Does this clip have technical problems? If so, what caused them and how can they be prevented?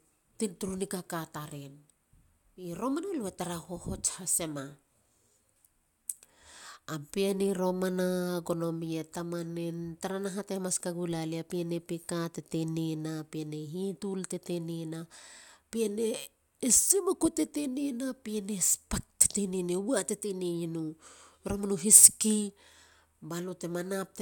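No, this clip has no technical problems, so there is nothing to prevent.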